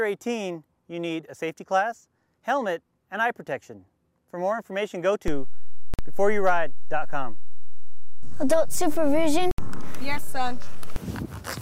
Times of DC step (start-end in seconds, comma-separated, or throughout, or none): 5.28-10.96